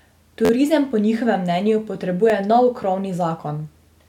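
At 0.45 to 0.50 s a repeated buffer makes the speech stutter: one 11.6 ms slice, which fits a 512-sample buffer, plays four extra times. At 2.30 s it repeats once, as a click. The waveform shows identical copies, with vertical broadband lines at each hard join on a spectrogram.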